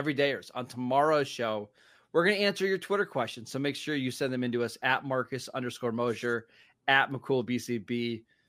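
From 4.87 s to the end at 8.49 s, just after "send them into us", the converter's clock wanders by around a microsecond, so samples land early or late. This sample clock jitter adds hiss and roughness, roughly 45 dB below the speech, strongest on steep, high-frequency passages.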